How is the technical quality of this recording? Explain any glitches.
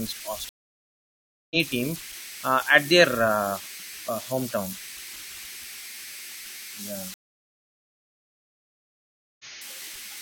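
The recording has two clear problems: a tone running through the whole clip, and two dropouts where the speech jumps ahead.

Converter idle tones are present throughout, at about 15 dB below the speech. With small inputs and no dither, the delta-sigma converter cycles through repeating bit patterns, producing a tone near 2 kHz in the pauses and grainy noise under quiet passages. On a spectrogram this appears as a thin horizontal line near 2 kHz.

Stream reconnects occur twice. From 0.49 to 1.56 s, about a second of silence ends with speech resuming roughly 0.7 s further on, at "team uh at". From 7.14 to 9.45 s, a silence of about 2.3 s skips roughly a second. Each time the connection dropped and a new decoder started mid-stream, muting or fading in its first frame. The waveform shows flat gaps with abrupt or ramped restarts.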